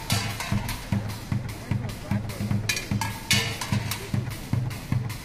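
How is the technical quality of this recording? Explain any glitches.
Nothing stood out as a technical problem on listening to this recording.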